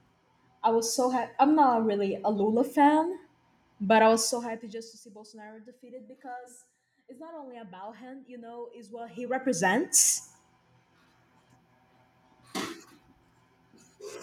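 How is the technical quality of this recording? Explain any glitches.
The recording has audible zipper noise during two level changes. From 4.13 to 5.02 s the speech drops by around 20 dB, and from 8.94 to 9.85 s it rises back by a similar amount. Each move is made in 1 dB steps, roughly 40 per second, with no smoothing between them. Each step leaves a tiny click, so a fine ticking rides on the voice while the level moves.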